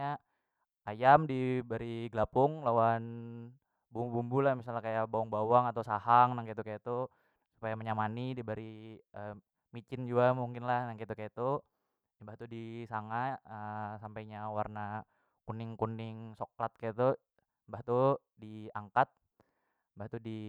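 A speech recording with nothing technically wrong with it.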